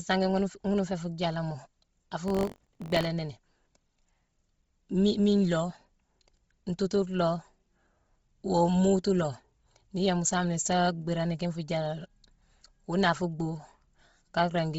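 Throughout the clip, the speech sounds breathy and grainy, likely Bluetooth LC3 compression at a low bitrate filling the stripped upper band with noise.

Buffer tearing runs from 2.26 to 3.07 s. Writer and reader collide inside each period, splicing in a small slice of audio from roughly 40 ms earlier, which gives a rattling 46.9 Hz buzz that fits a 1024-sample buffer.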